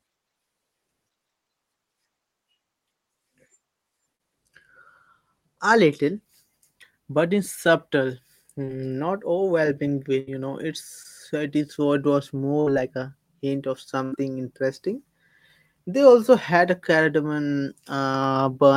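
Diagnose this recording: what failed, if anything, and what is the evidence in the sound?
Brief smears and small wobbles interrupt the speech at 4.15–4.21 s, 8.65–8.69 s and 11.03–11.06 s. This is short concealed packet loss on the network. About 40, 20 and 20 ms of audio arrived too late, and the decoder papered over each hole by extending the preceding sound.

Longer dropouts at 10.19–10.29 s, 12.60–12.68 s and 14.04–14.14 s sound like a held buzz or fading hiss before speech resumes slightly further on. These are bursts of packet loss, also network-side: roughly 80, 60 and 80 ms went missing, and the receiver stretched and attenuated the last sound across each gap.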